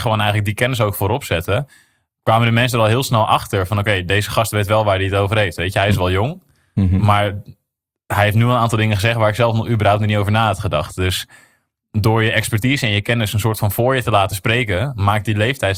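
Short blips of noise break through the speech at 2.93 to 3.05 s, between "de mensen er al" and "snel achter van oké"; at 10.89 to 10.95 s, after "niet over na had"; and at 13.55 to 13.61 s, between "je kennis een soort" and "voor je te laten". This is DAB burbling: weak reception let a small fraction of bit errors slip past error correction, corrupting MP2 audio data for a few frames.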